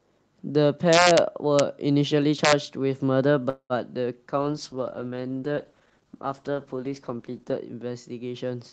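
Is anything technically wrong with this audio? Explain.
Yes. Three kinds of fault are audible in this speech.

Integer overflow occurs at 0.93–1.18 s, at 1.59 s and at 2.45–2.53 s. Peaks overshoot by about 2 dB or less and wrap to the opposite sign. The result is harsh cracks, sharper than clipping.

A call audio freeze runs from 3.49 to 3.73 s. Late packets likely drained the jitter buffer. The last sound buzzes on, then about 80 ms of silence follows. The speech resumes about 204 ms late, with nothing lost.

A call bitrate drop starts at 4.39 s and lasts to the end. Opus falls from 48 to 11 kbps and stays at the lowest rate for about 3.2 s. The speech turns rough and muffled as high frequencies below the normal 8 kHz band are lost.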